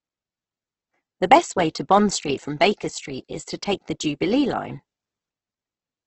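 Throughout the clip, the speech has likely been squeezed through Opus compression at a very low rate, something that fits roughly 12 kbps, with the encoder working in its music-style CELT mode. Short of bits, it rebuilds many bands by copying lower ones or filling them with noise, so the voice comes out rough, grainy and hissy instead of swirly. The bandwidth is also narrowed, with nothing above about 8.1 kHz, which leaves the top end dull.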